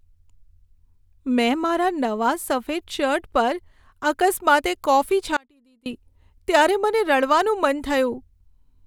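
At 5.37 s the speech suddenly drops out for about 0.49 s, leaving only a faint trace roughly 30 dB below normal until it returns at 5.86 s. This is an audio dropout to a faint residue. The likely cause is a break in the signal path while the following stage stayed live. The hard edges and the faint residue under the gap set it apart from a natural pause or a fade.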